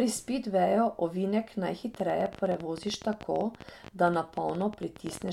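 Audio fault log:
1.95–5.29 s, train of clicks: after "spidveju ovinek", about 50 irregular clicks at roughly 14 per second, peaking about 5 dB above the speech, likely from interference.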